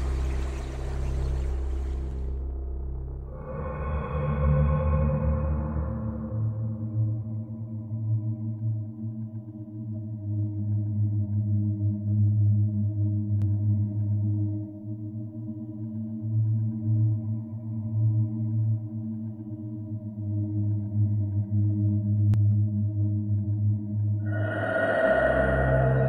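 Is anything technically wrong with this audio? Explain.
Yes, there's a doubled audio track from about 13.42 s to 22.34 s. A second full-band copy of the sound runs roughly a tenth of a second behind the original, at about the same level, so everything gets a slapback echo with no decay or room colour. It likely comes from the audio being captured again through a slower path, or from an edit leaving two copies out of step. The double cuts in and out abruptly at both ends.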